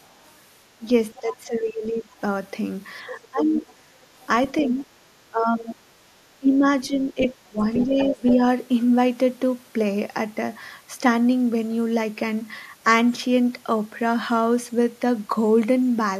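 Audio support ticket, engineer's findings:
Other side's voice leaking through: second voice under the talker at 0.05–1.19 s (about 30 dB down), 2.18–4.58 s (about 15 dB down), 7.25–8.33 s (about 10 dB down). Likely incomplete echo cancellation of loudspeaker pickup. Added voice, not level loss.

Speech suppressed in double talk: talker's own level dips at 0.78–2.11 s (about 15 dB, around a second affected), 3.1–3.66 s (about 15 dB, a few tenths), 4.61–8.38 s (up to about 20 dB, roughly two seconds). Likely canceller ducking during overlap. Near-side loss, not intrusion.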